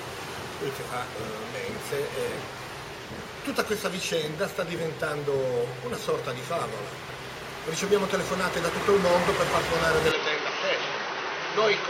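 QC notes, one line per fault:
10.12–11.89 s, input switched to a poorer device. The sound turns dull and boxy with no gap at the change. Nothing reaches above 6.2 kHz. Level drops about 5 dB, with new noise about 30 dB below. Likely another microphone or headset profile took over.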